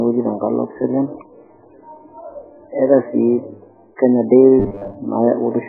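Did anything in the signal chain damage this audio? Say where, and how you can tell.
Yes. At the codec stage, likely MP3 compression at a very low bitrate starves the whole clip of bits, and the speech sounds watery and smeared.

During call processing, a loudspeaker-to-microphone loop, likely on the edge of oscillation, adds a feedback whistle at 3.8 kHz from 3.69 s to the end, sitting about 20 dB below the speech.

In the driver or buffer stage, audio likely arrives late, so short chunks repeat from 4.60 to 4.96 s. About half the sound is repeated, producing a robotic sound with a 100 Hz buzz, which fits a 10 ms buffer.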